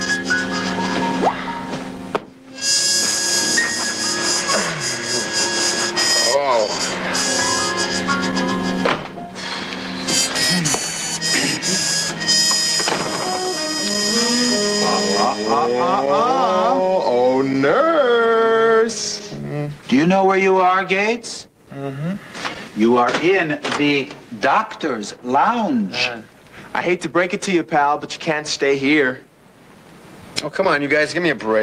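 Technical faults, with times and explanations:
Nothing stood out as a technical fault on listening.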